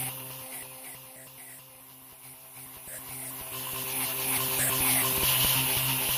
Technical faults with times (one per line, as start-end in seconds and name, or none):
none